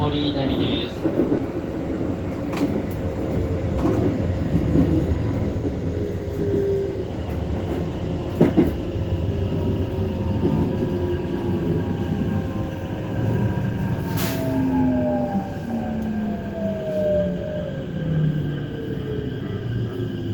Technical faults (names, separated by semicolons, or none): short concealed packet loss